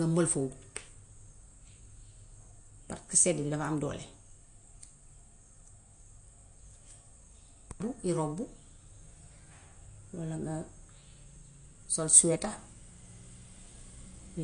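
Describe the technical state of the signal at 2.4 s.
At 2.4 s the speech carries plainly audible damage, likely from MP3 compression, and it runs through the whole clip. Nothing sounds above about 9.8 kHz. The encoder has cut the treble there to save bits. It also drops weak frequency detail, which flickers in and out between frames. The result is a dull, watery, swirly quality with smeared attacks. The damage fits a low bitrate near 48 kbps.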